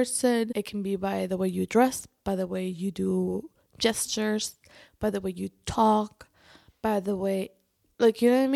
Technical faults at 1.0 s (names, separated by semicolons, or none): none